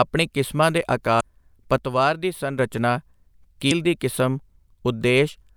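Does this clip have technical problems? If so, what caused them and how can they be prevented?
Yes. Damaged data in the compressed stream causes two short glitches, at 1.17 to 1.21 s just after "ਆਪਣੀ ਕਿਸਮਾਂ ਦੇ" and at 3.67 to 3.72 s. The decoder hits corrupted frames, loses sync and jumps to the next valid frame header, producing a blip. Prevent it with checksummed storage and error-protected transport.

From 1.78 to 2.59 s the speech level drops abruptly by about 6 dB, then recovers. This is likely one channel dropping out, leaving the mono sum with half its common signal. Prevent it by securing stereo connections and monitoring both channels during capture.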